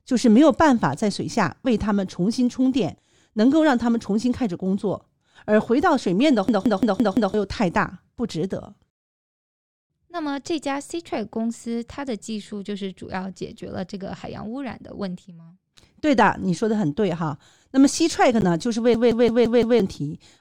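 At 6.21 s a corrupt frame was decoded: damaged bits in one compressed frame were played as though valid, so misread gain and spectral codes put energy in the wrong frequency bands. The result is a brief chirp-like blip in the speech. The same fault returns from 18.41 to 18.43 s, this time across a couple of consecutive frames, giving a slightly longer squeak of misplaced energy.

From 6.49 to 7.34 s the system hung while the audio hardware kept replaying its ring buffer. A 170.67 ms slice, which fits an 8192-sample buffer, repeats exactly five times at 5.86 Hz, producing a rapid machine-gun stutter in place of about a second of speech. The same system hang loop recurs from 18.94 to 19.80 s, with the identical loop length, rate and five repeats, and again about a second of audio is lost.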